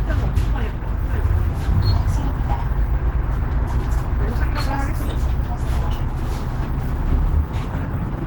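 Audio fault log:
throughout, Opus compression: the sound is plainly damaged, muffled, hoarse and grainy, likely from Opus in hybrid mode at a rate that fits 16 kbps. Bands are refilled with folded or noise-like energy instead of exact detail, though content still reaches about 20.4 kHz.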